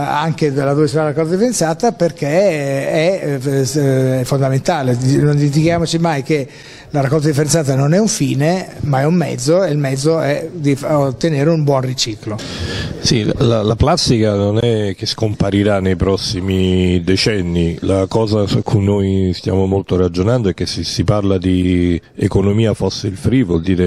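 Two sharp, isolated clicks cut through the sound, one at 7.07 s and another at 22.44 s, each a single instant with a thin vertical line across the spectrum. These are most likely dropped samples: a fraction of a millisecond of the stream goes missing, so the waveform leaps straight from one value to a later one. That gap is far too brief to remove anything audible, leaving only the click from the abrupt step.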